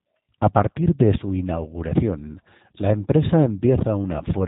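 Throughout, the speech carries G.729 codec damage: a filter-and-pulse model, consistent with 8 kbit/s coding, rebuilds it, leaving it rough and synthetic, with nothing above 3.8 kHz.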